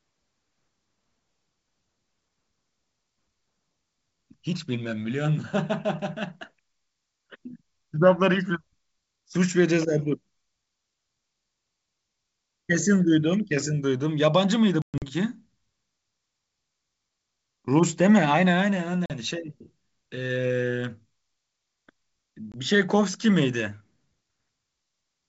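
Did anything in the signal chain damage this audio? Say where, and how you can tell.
Yes, at the network stage: packet loss on an ADPCM call. Hard silent gaps fall at 14.82–15.05 s (160 ms missing, longest run 120 ms), 19.06–19.11 s and 22.52–22.55 s. After each gap, the decoder's predictor and step size no longer match the sender's, so the speech resumes slightly distorted before resynchronising.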